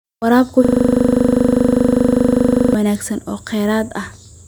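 At 0.65 s the speech locks into a system hang loop. The computer or driver froze while the sound hardware kept replaying one 40 ms slice of its buffer. That slice repeats about fifty times, forming a steady 25 Hz buzz. Sound resumes at 2.74 s with "wanaagsan oo".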